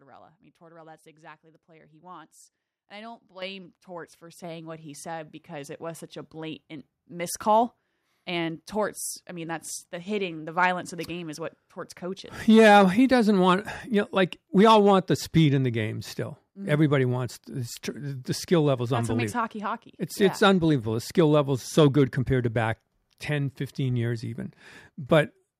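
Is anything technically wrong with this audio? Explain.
Yes. The microphone volume is stepped up twice: at 3.42 s, just after "I don't", by about 9 dB, and at 4.44 s, just before "what he said", by about 6 dB. The input gain was raised abruptly, so speech and background jump together.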